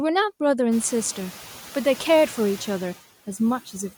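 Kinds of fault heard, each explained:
Nothing's wrong with this one; the room's own background noise comes up by about 22 dB around half a second in and then sits about 21 dB under the speech, which is just the space the mic is in.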